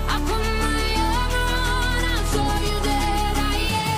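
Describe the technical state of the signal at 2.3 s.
At 2.31 s the audio jumps ahead slightly. These are compressed frames skipped: what sounds like a single frame, roughly 20 ms of audio, never plays.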